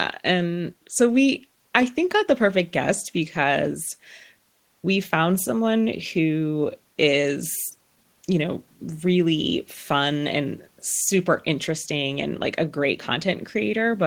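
No technical faults can be heard anywhere in the speech; the signal holds steady without any audible break or disturbance.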